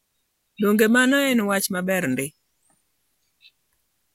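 No technical faults can be heard anywhere in the recorded speech, and the signal holds steady throughout.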